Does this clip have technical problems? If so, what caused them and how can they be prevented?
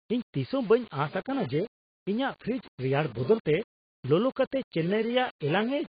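Yes. Throughout the speech there is grainy distortion that tracks the signal, with the error about 25 dB below it. This is likely low bit depth without dither: rounding to what sounds like about 6 bits, so each sample snaps to a coarse step. To prevent it, work at higher resolution and add dither whenever bit depth is reduced.

The clip also shows heavy codec damage across its whole length, with nothing above 4.8 kHz, leaving the speech dull. This is likely AAC compression (AAC-LC) at a low bitrate, which fits roughly 30 kbps, where the encoder discards upper bands to save bits. To prevent it, encode at a substantially higher bitrate.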